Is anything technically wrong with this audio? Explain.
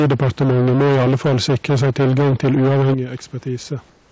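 Yes, there are three faults.

From the start to 2.94 s the sound is harshly distorted by microphone overload. The input most likely ran about 14 dB beyond what the converter can represent, so the peaks are flattened against the converter's limit across a large share of the waveform, roughly two fifths of it. That produces a gritty, crackling edge on every loud syllable. Codec distortion would smear the sound rather than crack at the peaks. The call codec's bandwidth limit at 8 kHz only dulls the top end.

At 2.94 s the microphone volume steps down. Everything drops by about 11 dB in one instant, and the crackle stops at the same moment. This is most likely the call software cutting the device input gain after detecting the clipping. A compressor or automatic gain control would glide the level down gradually. Here the voice and the room noise fall together in a single step.

From 3.88 s to the end, about 0.24 s, comfort noise replaces the background. 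The real room noise, sitting about 37 dB below the loud parts, gives way to a smooth, featureless hiss about 3 dB quieter. This is likely the sender halting transmission in a pause while the receiver synthesises a noise that matches the background's rough shape. A noise gate would leave near silence instead, and here a steady synthetic bed fills the pause.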